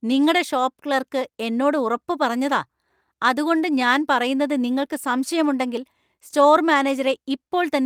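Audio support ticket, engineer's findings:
Speech signal reviewed in full, with no technical faults found and nothing to attribute to any component in the path.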